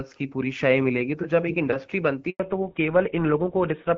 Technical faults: handover gap; fallback to narrowband

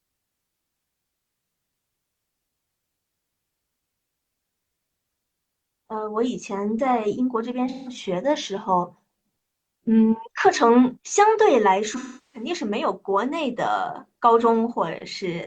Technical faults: AAC frame loss with concealment

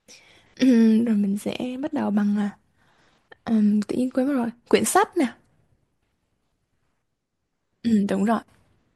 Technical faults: none

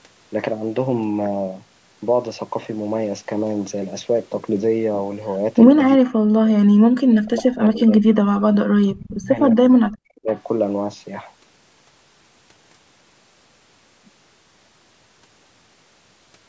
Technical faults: speech suppressed in double talk; echo leak

